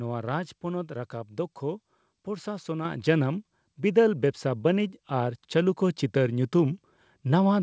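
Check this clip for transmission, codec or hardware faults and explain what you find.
One fault stands out: a microphone volume step-up at 2.85 s. The software raised the input gain in one jump of about 6 dB, so the speech and the background noise floor both become louder at the same instant and stay there. A speaker simply talking louder would not lift the background, and a gradual gain control would ramp rather than step. The call codec path caps the audio at 8 kHz, which fits G.722 at 64 kbps.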